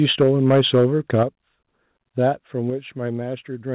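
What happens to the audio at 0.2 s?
At 0.2 s the speech is inside a stretch of microphone overload, from 0.02 to 0.85 s. Peaks run about 5 dB past the converter's ceiling, and a small share of samples have their tops flattened. The likely cause is input gain set too high. The loudest syllables take on a harsh, crackling edge.

Just after, at 0.23 s, the microphone volume is stepped down. Voice and background drop by about 2 dB all at once. This is likely the call software reacting to the clipping by cutting the device's input level in one step.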